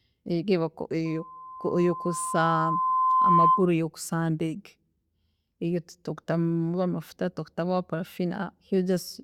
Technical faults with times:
1.05-3.69 loudspeaker feedback squeal

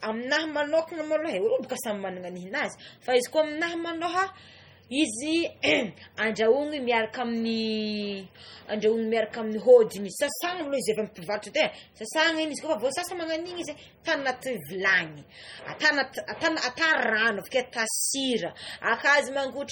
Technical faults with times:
0.00-19.71 low-bitrate audio saved at a high bitrate

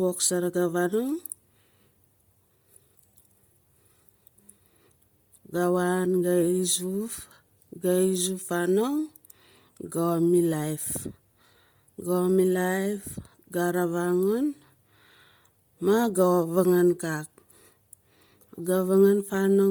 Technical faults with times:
0.00-19.71 Bluetooth LC3 compression

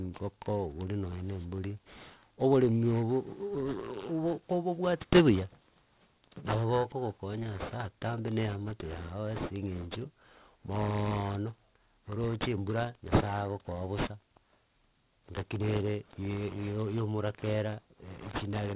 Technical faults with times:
0.00-18.76 aliasing

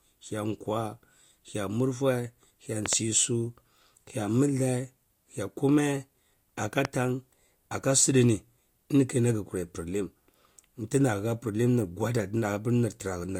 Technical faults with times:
2.86-2.95 loud pop
6.85-6.87 loud pop

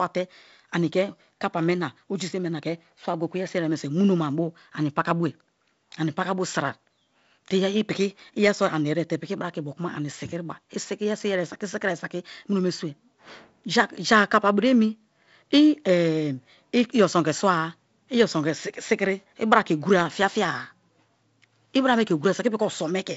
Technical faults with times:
none

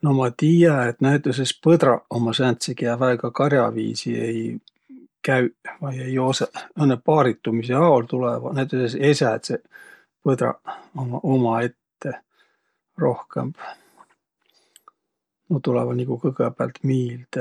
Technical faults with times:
none

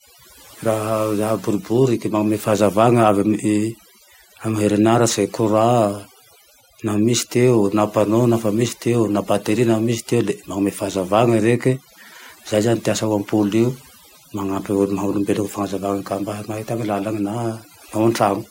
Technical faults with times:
0.00-18.51 overdone noise removal

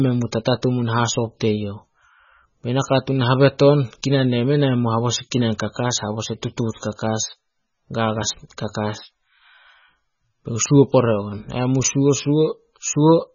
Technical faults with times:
0.00-13.35 MP3 compression

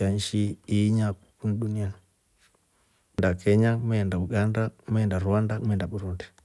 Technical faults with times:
none

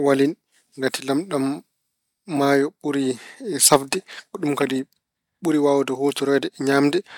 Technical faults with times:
none

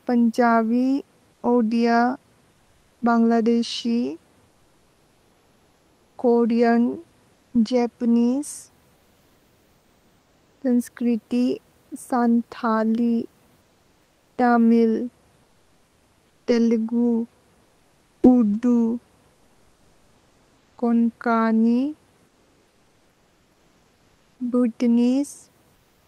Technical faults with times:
1.33-1.43 comfort noise in place of the background
2.51-3.01 comfort noise in place of the background
7.33-7.53 comfort noise in place of the background
13.61-14.37 comfort noise in place of the background
15.43-16.47 comfort noise in place of the background
17.63-18.23 comfort noise in place of the background
22.27-24.39 comfort noise in place of the background
25.75-26.07 comfort noise in place of the background

